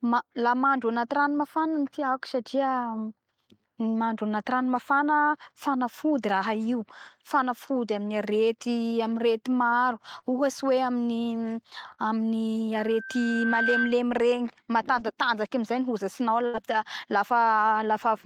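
At 10.19 s, just after "arety maro", there is a short concealed packet loss. About 40 ms of the speech never arrived in time. The receiver bridged the hole by extending the preceding sound, then blended back into the real signal. It comes across as a brief smear lasting until 10.25 s. The same fault returns at 11.94 s, running to 12.01 s, again with about 40 ms patched over.

From 12.75 s a loudspeaker feedback squeal appears. The microphone is hearing the loudspeaker it drives. At 1.6 kHz the loop gain tops one, so that tone feeds on itself. It swells over roughly a second into a steady whistle, ending up around 5 dB above the speech. The squeal stops at 14.0 s.

At 16.46 s comes a burst of packet loss. About 80 ms of audio went missing in a row. The receiver filled roughly 75 ms of it by carrying the last sound forward while fading it down. This is heard as a held buzz or fading hiss that ends at 16.57 s. 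The speech then picks up further on, with the lost stretch simply gone.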